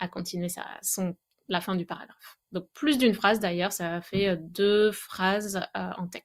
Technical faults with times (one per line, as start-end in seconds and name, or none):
none